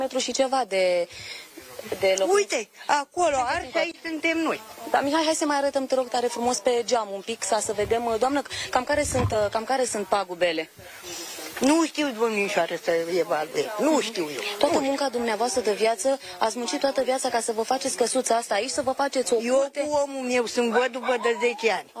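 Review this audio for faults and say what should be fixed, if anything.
No faults found; nothing needs fixing.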